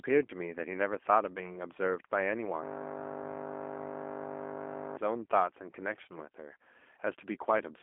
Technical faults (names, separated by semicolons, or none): G.729 codec; system hang loop